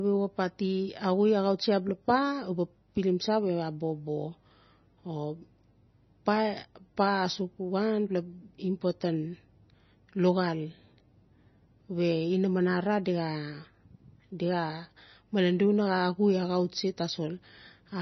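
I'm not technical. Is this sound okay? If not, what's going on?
No. The whole clip sounds dull and watery. Nothing reaches above 5.9 kHz, so the crisp treble is missing. The damage is heavy, with a swirly, underwater quality and smeared s sounds. This is likely MP3 compression squeezed too hard.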